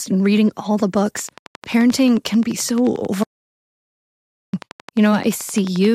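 From 1.19 s to 5.86 s a regular ticking sits over the speech at about 11.4 clicks per second, some fifty evenly spaced pops peaking a little above the speech itself. This train of clicks is likely interference or a struggling interface injecting repeated pulses.

At 3.24 s the speech cuts off into dead silence with no room tone, returning abruptly at 4.53 s after about 1.29 s. This audio dropout to silence likely came from the input being lost while the recorder kept writing silence, so that stretch of speech is gone.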